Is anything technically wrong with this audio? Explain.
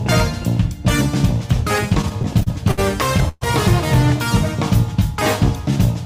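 Yes. From 1.89 to 2.79 s there are repeated stalls (stutter): ten brief gaps, up to 62 ms each, bridged by repeating the last sound as packets trickle in late. Nothing is lost, so it drags rather than skips.

At 3.29 to 3.43 s a single call audio freeze holds the sound for about 127 ms, fading briefly to silence. It is one longer hold, not a chain, likely from packets delayed in transit.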